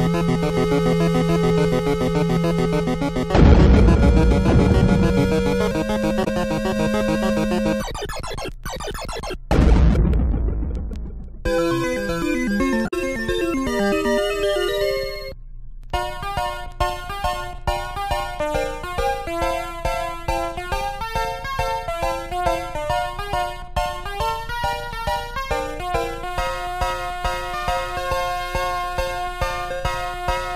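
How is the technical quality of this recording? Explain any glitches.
Two short glitches mar the recording, both from damaged data in a compressed stream, at 6.21 to 6.27 s and 12.84 to 12.94 s. Corrupted bytes make the decoder misread frames and hunt for the next valid header, giving a brief garbled chirp or squawk. A plain dropout would leave a silent gap, and a click would be a single sharp tick.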